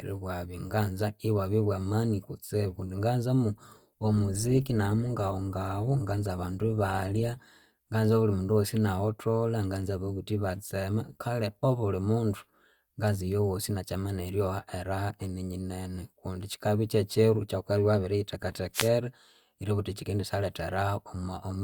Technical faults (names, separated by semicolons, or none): adaptive stream at a lower bitrate; wireless microphone noise hit